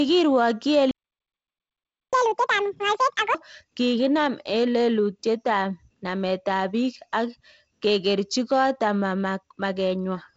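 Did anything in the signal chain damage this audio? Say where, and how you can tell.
Yes. The fault sits in the playback stage. At 0.91 s the speech cuts off in mid-flow and the output stays completely silent until 2.13 s, a gap of about 1.22 s. That is a playback stall, most likely the player's buffer running dry or its output thread being held up. No audio reaches the converter until playback resumes, so the sound simply stops rather than fading or breaking up.

The same player then tries to recover the lost time. From 2.13 s to 3.35 s the speech runs at 2.0 times normal speed, and its pitch jumps by around ten semitones, so it sounds hurried and squeaky. This is catch-up at higher speed: the backlog is resampled to drain the queue, which raises speed and pitch together. At 3.35 s both fall back to normal. The G.722 wideband coding underneath carries content up to about 7.7 kHz.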